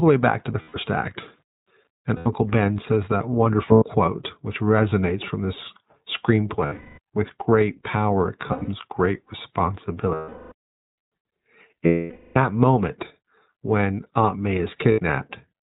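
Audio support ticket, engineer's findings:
iLBC codec throughout: narrowband coding, consistent with about 15.2 kbps in 20 ms frames. Nothing above 4 kHz survives. Each frame's excitation is coded independently, giving plainly audible roughness and a synthetic edge to the speech.

Lost iLBC frames at 0.62–0.77, 2.16–2.28, 3.72–3.85, 6.66–6.99 (scattered, longest run around 0.2 s), 8.48–8.69 (scattered), 10.14–10.52, 11.86–12.38 and 14.92–15.00 s. The decoder repeats the last pitch cycle with noise, so gaps sound like held, buzzy vowels. The longer ones fade out. Speech recovers immediately after each gap.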